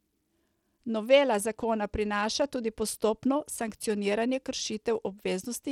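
From start to finish the speech carries plainly audible codec damage: the upper frequencies thin out and flicker in and out, and a gritty, grainy noise rides on the voice with a metallic edge from aliasing. The likely cause is Bluetooth SBC compression at a low bit allocation, which fits a link running around 96 kbps. The encoder starves the weaker high sub-bands of bits and quantises the rest coarsely.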